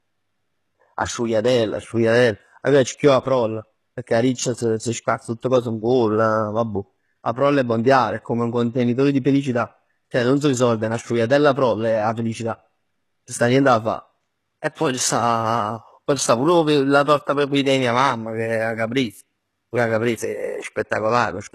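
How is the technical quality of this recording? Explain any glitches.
Technical quality is poor: plainly audible codec damage runs through the whole speech recording.

The likely cause is HE-AAC compression at a very low bitrate, pointing to roughly 16 kbps. Only the lower spectrum is genuinely coded, and the treble is synthesised by copying lower bands upward. Nothing survives above 12.3 kHz, and s sounds turn gritty and metallic.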